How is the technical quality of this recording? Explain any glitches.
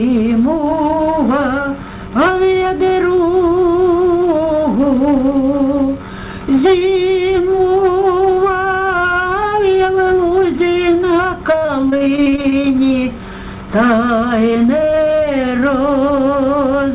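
The recording has one clear glitch, a burst of repeated packet loss (robotic sound) from 11.52 to 12.66 s. Throughout, nothing sounds above 4 kHz, which fits a G.711 narrowband call codec at 64 kbps.

Over that stretch, about fifteen short holes open in quick succession, none longer than 27 ms. Each hole is patched by stretching the last bit of sound forward. About 300 ms goes missing, roughly a quarter of the span. The result is choppy, with pieces dropping out.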